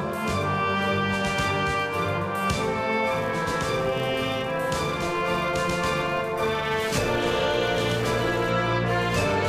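From 3.12 s to 8.50 s, a filter restarted on every block. It loses its state at each block boundary and starts again from silence. Each restart leaves a small transient. Together they form a 345 Hz buzz, which fits a 128-sample block, rising and falling with the level.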